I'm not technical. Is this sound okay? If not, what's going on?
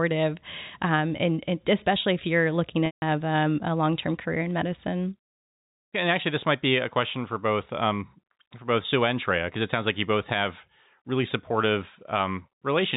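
No. At about 2.86 s, just after "especially if you're looking", the speech briefly turns into a held, buzzy tone that fades to silence before returning at 3.02 s with "um a long term". This is packet loss with pitch repetition: about 160 ms of audio went missing, and the receiver filled the gap by repeating the last bit of voice and fading it out.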